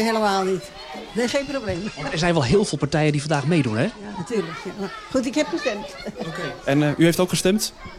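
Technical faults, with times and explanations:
1.54–4.45 s: digital radio blending to analogue. The receiver lost the digital stream and cross-faded over about 240 ms to the station's FM broadcast, then back at 4.45 s. On FM a faint hiss sits roughly 40 dB under the programme. The level doesn't jump, and both ends are smooth fades rather than hard cuts, which separates this from a simple dropout or low-pass switch.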